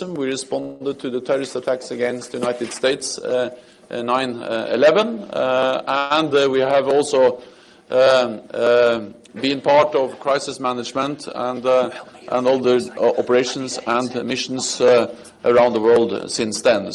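At 0.61 and 5.98 s the sound stalls into a fading buzz for about 190 and 120 ms, a call audio freeze, likely from delayed packets. It resumes where it stopped, unlike a loss dropout. From 11.44 to 12.49 s and 13.94 to 15.77 s, jitter buffer speed-up runs about 9 and 10% fast at unchanged pitch, trimming roughly a tenth and a fifth of a second.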